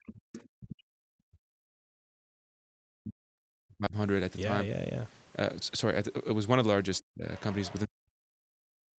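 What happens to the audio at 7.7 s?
A faint second voice surfaces from 7.36 to 7.8 s, roughly 20 dB below the main speech. This is the other side's voice leaking through, likely loudspeaker echo the canceller missed. A spectrogram shows weak, separate harmonic traces under the speech bands, while the waveform barely changes.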